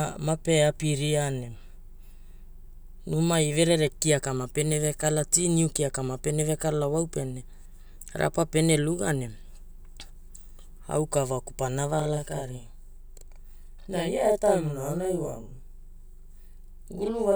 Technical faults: channel delay (doubling)

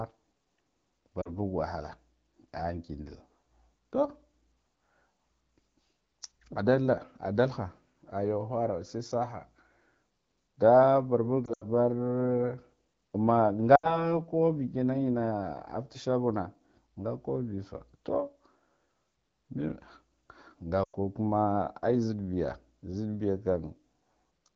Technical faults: lost AMR speech frames

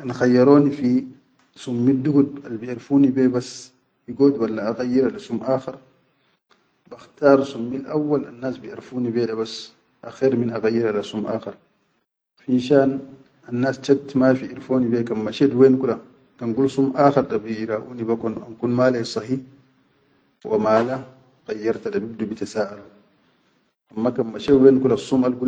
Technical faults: loud pop

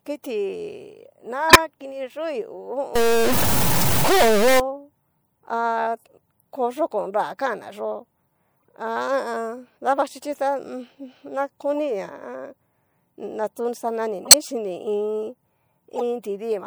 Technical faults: corrupt frame decoded; stuck bit

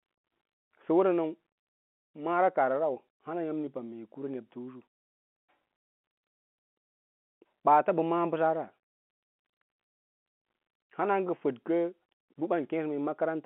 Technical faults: none

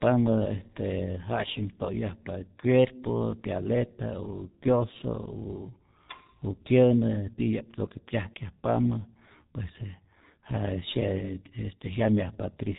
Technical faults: G.723.1 codec

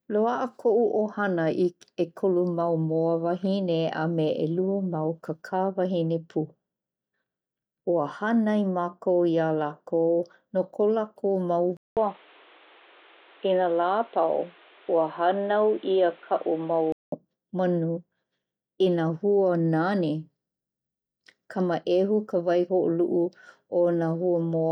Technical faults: input switched to a poorer device

